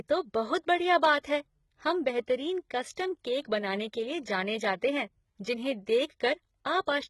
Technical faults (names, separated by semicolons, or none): HE-AAC compression; pre-echo